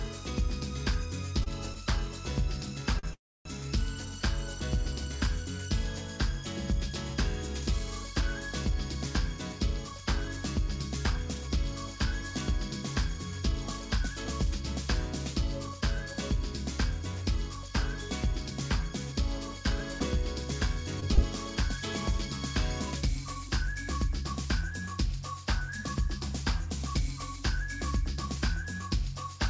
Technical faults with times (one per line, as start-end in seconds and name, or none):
1.44-1.48 short stall from a late packet
2.99-3.05 short stall from a late packet
3.13-3.47 call audio freeze
9.26-23.77 jitter buffer speed-up
20.00-21.19 scattered short gaps